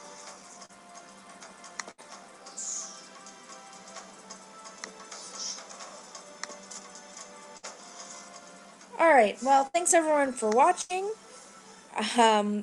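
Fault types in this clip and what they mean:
Short concealed packet loss: a brief smear or wobble near 0.65 s, where about 35 ms was rebuilt from the preceding sound after 40 ms never arrived.
Burst of packet loss: four held buzzes or fading hisses, at 1.91, 7.57, 9.67 and 10.81 s, filling 55 to 78 ms gaps, with 60 to 80 ms of audio skipped.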